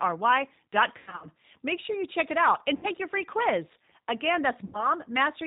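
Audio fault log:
Throughout: G.729 codec. The speech sounds slightly rough and synthetic. It is rebuilt at 8 kbit/s from a vocal tract filter, a pitch predictor and a few pulses in each half of every 10 ms frame. Nothing above 4 kHz survives, so the top end is dull.
0.98–1.27 s, 2.77–2.87 s, 4.65–4.86 s: VoIP packet loss concealed by the speech codec. In the first gap, 180 ms went missing across 240 ms, with runs up to 90 ms. The second, between "check it out and" and "your free quiz", lost 60 ms and the third lost 90 ms. In each, the decoder stretches its last pitch and filter into a buzzy tone or a coloured noise that fades, and the speech stays weak briefly after the gap.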